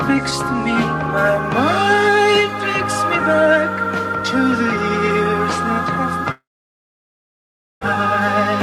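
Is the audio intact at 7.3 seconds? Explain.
No, 7.3 s falls inside a stretch from 6.31 to 7.83 s where the last sound smears briefly, then goes silent, likely a long network dropout losing about 1.5 s.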